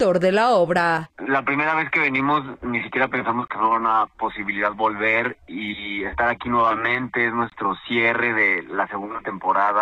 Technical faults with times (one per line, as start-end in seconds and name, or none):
3.48-3.50 gap between chunks
7.50-7.52 gap between chunks